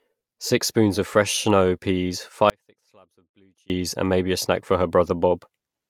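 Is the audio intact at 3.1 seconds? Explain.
No. The signal path likely lost its source for about 1.2 s, from 2.50 to 3.70 s, while the chain after the break stayed live. This is an audio dropout to a faint residue: after "of fresh snow peas" the sound cuts abruptly to a faint leak roughly 35 dB down, then snaps back at "and maybe a snack".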